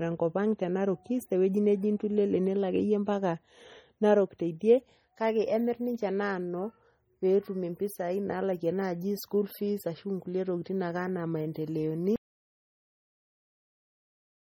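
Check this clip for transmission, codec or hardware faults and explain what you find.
One fault runs through the whole speech clip: heavy MP3 compression damage. The sound is watery and swirly throughout, and s sounds carry metallic chirps. Consonant attacks are smeared. Nothing is heard above 20.8 kHz. The likely cause is an MP3 encoder starved of bits, which fits a rate around 32 kbps. With so few bits, it discards weak frequency lines. Those lines then flicker on and off from frame to frame, which produces the swirl.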